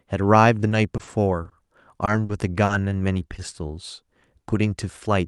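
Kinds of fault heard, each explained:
Repeated packet loss (robotic sound): Between 0.69 and 1.53 s, the call's audio packets kept failing to arrive in time. The receiver covered six separate holes, the longest 40 ms and about 140 ms in all, by stretching out whatever speech came just before each one. Because these patches fill roughly a sixth of that stretch and follow closely on one another, the speech turns choppy, with small pieces gone.
Short concealed packet loss: Three isolated dropouts hit the decoder after the robotic stretch: 20 ms at 2.05 to 2.09 s, then 40 ms each at 2.25 to 2.31 s and 2.65 to 2.71 s. Each time, the receiver carried the preceding speech forward to fill the hole, then blended back into the real signal. Each dropout comes across as a brief smear or wobble in the speech, and any very short consonant falling inside a gap may be lost.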